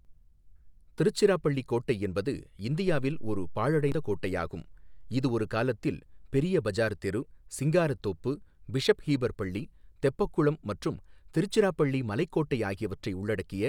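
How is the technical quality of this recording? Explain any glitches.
The recording has one glitch, from damaged data in a compressed stream, at 3.92 s, between "கோட்டை என்பது இந்தியாவில் ஒரு" and "கோட்டையாகும் இது ஒரு காலத்தில்". Corrupted bytes made the decoder misread a frame and lose sync briefly, producing a very short disruption in the sound.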